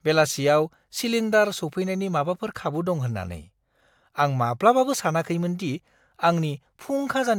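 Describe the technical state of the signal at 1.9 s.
At 1.9 s the speech signal is intact, with no dropout, clipping, distortion or other audible fault.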